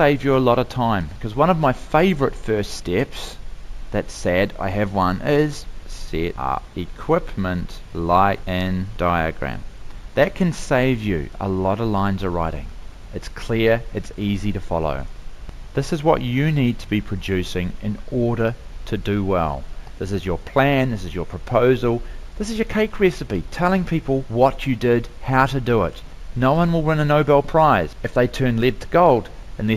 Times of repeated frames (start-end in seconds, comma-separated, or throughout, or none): none